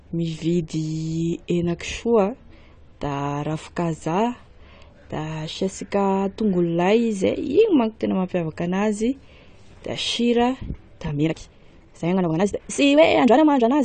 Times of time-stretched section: 11.07-13.84

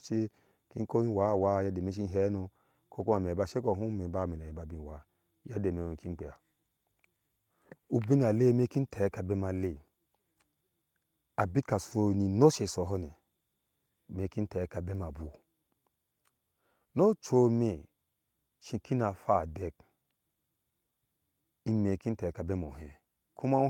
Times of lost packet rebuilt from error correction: 1.25-1.43, 2.99-3.17, 4.49, 11.91

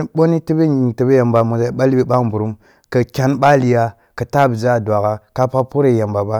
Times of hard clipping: 1.36-1.41, 2.14-2.17, 3.43-3.55, 5.41-5.59

